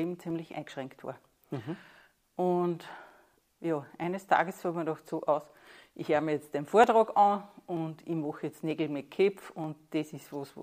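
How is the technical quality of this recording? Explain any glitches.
Clock drift buffer slips run from 0.30 s to 10.58 s: a click about every 0.93 s, around ten in all. The likely cause is two devices running on separate clocks that disagree by roughly 400 parts per million, so the buffer between them gradually fills or drains until a short block of samples is dropped or repeated. Each slip sounds like a brief tick in the signal, which fits jumps of around 15 samples.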